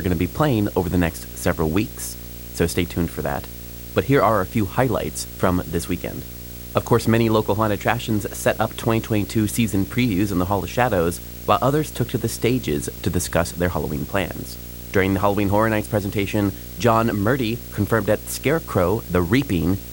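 From start to finish the speech sits on a video or display buzz, a rasping tone at 59.94 Hz with gritty hash above it, plus a thin whine at 15.7 kHz, all roughly 15 dB under the voice. A screen or video cable is coupling its field and line scanning into the audio path. Mains hum differs: it rests on a clean 50 or 60 Hz and its harmonics, without the line-rate whine or the hashy top.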